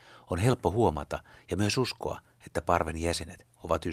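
Nothing here needs flagging; the speech runs its whole course without any technical fault turning up along the way.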